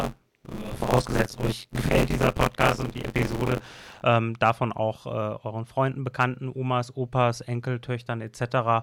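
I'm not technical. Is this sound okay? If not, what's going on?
No. For the first 4 seconds, from the start to about 4.04 s, the speech has a robotic, rattling buzz, a steady growl of about 94 times per second that sits on the speech and disappears in the pauses. This is buffer tearing: the audio is handed over in small chunks, and the part of the system filling them has fallen out of step with the part playing them. About half of each chunk is stale sound from a few hundredths of a second earlier, which fits a 512-sample buffer.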